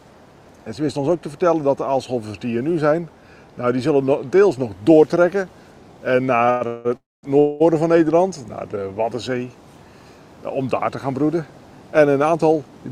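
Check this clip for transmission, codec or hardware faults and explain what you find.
Two kinds of fault appear, a burst of call audio freezes a little past the midpoint and a jitter buffer speed-up near the end.

Between 6.50 and 7.62 s there are four call audio freezes, at 6.50–6.63, 6.67–6.87, 6.97–7.25 and 7.39–7.62 s. In each, the last sound is held as a fading buzz for 105, 178, 264 and 211 ms. The third one dies away into about 210 ms of silence. The likely cause is packets stalling so the jitter buffer ran dry. The sound then resumes where it stopped, with nothing lost but the delay pushed later each time.

From 11.92 to 12.86 s a jitter buffer speed-up makes the audio sound rushed, running at about 112% speed with its pitch unchanged. The receiver was trimming the delay built up earlier by repeatedly cutting tiny pitch-period slices, removing roughly a tenth of a second in total.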